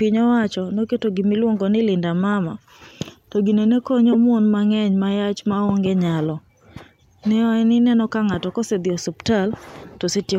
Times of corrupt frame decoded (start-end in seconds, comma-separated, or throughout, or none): 2.33, 4.12-4.15, 9.56-9.66